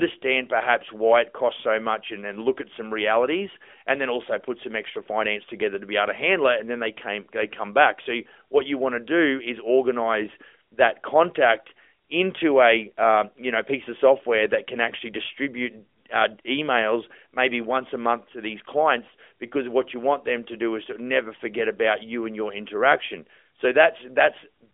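The speech comes through a narrowband telephone-style channel that passes roughly 250 Hz to 3.4 kHz with nothing above 3.6 kHz, with only light coding damage consistent with a mobile link running at its highest rate of about 12.2 kbps, and no faults can be heard.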